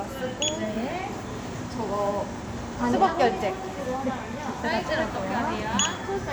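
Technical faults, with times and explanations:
Nothing stood out on listening to the audio.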